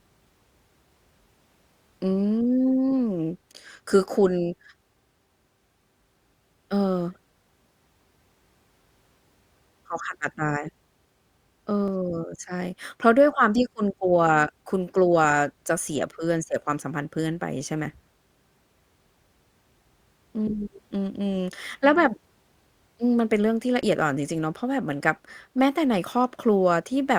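At 11.88 s and again at 23.83 s the speech skips forward abruptly, with roughly 30 ms of audio missing and the two sides butted together with no gap of silence. This is audio missing between chunks: the likely cause is a recorder or processor handling the signal in blocks and dropping a short stretch each time it closes one block and opens the next. The spacing of the skips fits a chunk length of 6 s.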